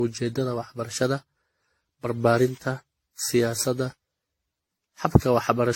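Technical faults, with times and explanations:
Throughout, generation loss: the speech sounds swirly and hollow, with a watery smear on consonants and blurred attacks, and nothing is present above 16.6 kHz. The damage is heavier than one lossy pass would leave, and it likely comes from around seven successive rounds of decoding and re-encoding, consistent with AAC-LC near 64 kbit/s. Each pass quantised the signal again on a shifted frame grid, so noise piled up.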